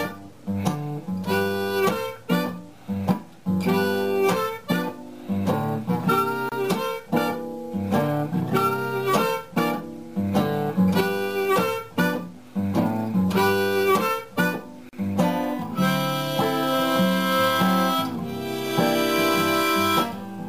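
Brief dropouts cut into the continuous sound at 6.49 s, lasting about 27 ms, and at 14.89 s, lasting about 40 ms, each with smeared edges before the sound resumes. These are gaps at joins of encoded pieces, where the encoder's start-up silence and last-frame padding were never trimmed.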